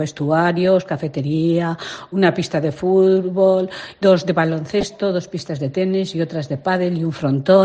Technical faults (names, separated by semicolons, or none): DAB burbling